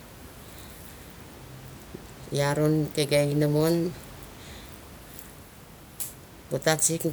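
Speech recording with no technical faults; the room's background noise sits about 21 dB below the speech and is part of the acoustic environment, not the signal chain.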